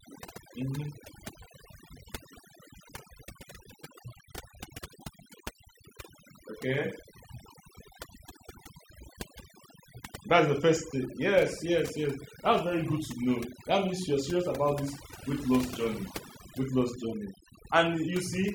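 From start to finish, overdone noise removal is at work. A noise reduction stage has been pushed far too hard, so any frequency band sitting close to its idea of the background noise gets pulled down steeply or shut off entirely, and the softer parts of the speech are caught in the same cut. What remains between phrases is near silence scattered with twinkling, chirpy specks.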